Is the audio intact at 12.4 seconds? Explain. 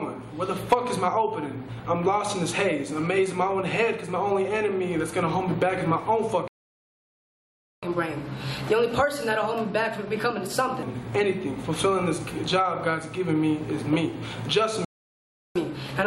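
Yes, the audio at 12.4 seconds is intact, with no dropout, click, distortion or other fault at that moment.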